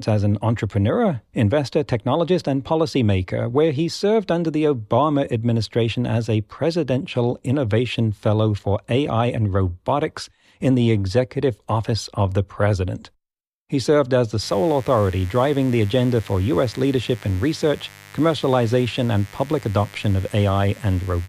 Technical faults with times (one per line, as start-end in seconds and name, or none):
14.40-21.28 mains buzz